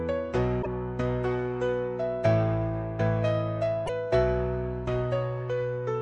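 Two brief glitches break into the audio, one from 0.59 to 0.67 s and another from 3.83 to 3.89 s, each lasting under a tenth of a second. Both come from damaged data in a compressed stream: bytes in those stretches of the encoded file were lost or overwritten, so the decoder misread the affected frames, lost sync and produced a glitch before locking onto a valid frame header and carrying on.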